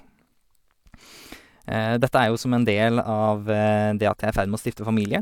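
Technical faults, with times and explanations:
Nothing stood out as a technical fault on listening to this speech recording.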